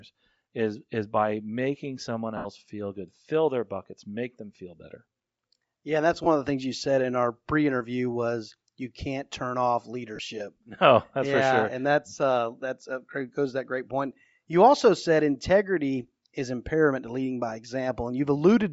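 Bluetooth LC3 compression runs through the whole clip, and the damage to the speech is plainly audible. The voice carries a breathy, grainy edge, which is most likely the LC3 transform codec of LE Audio at a bitrate that fits about 32 kbps with 10 ms frames. At that rate the encoder discards much of the upper spectrum and the decoder fills those bands with noise, so the highs turn hissy and granular.

Lost LE Audio frames break the speech three times. The first runs from 2.37 to 2.47 s, just after "is by making someone", and lasts 80 ms, which fits eight lost 10 ms frames. The second runs from 6.24 to 6.27 s, between "and that's" and "of the things you", with 20 ms missing. The third comes at 10.16 to 10.19 s, after "you can't turn off", and covers 30 ms. In each gap the decoder repeats the last good spectrum with random signs, so the speech smears into noise instead of dropping out.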